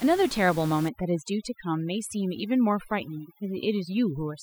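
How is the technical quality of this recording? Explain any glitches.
The speech suffers from overdone noise removal from 0.89 s to the end of the clip. From that point the background drops and breaks up into small twinkling specks. A noise reduction stage is pushing individual frequency bands far down whenever they sit close to its noise estimate. The room noise is only about 17 dB below the speech, so quieter parts of the voice fall within that estimate and are stripped out along with the noise.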